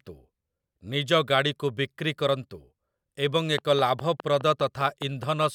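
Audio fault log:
3.58–5.44 s, train of clicks: A run of about ten sharp clicks sits on top of the speech. They arrive at a steady 4.88 per second, evenly spaced, and each has much the same shape. Their peaks stand about 10 dB above the speech, so they read as a distinct ticking rather than part of the sound. The likely cause is interference from nearby equipment or a faulty connection or power supply, injecting the same pulse over and over.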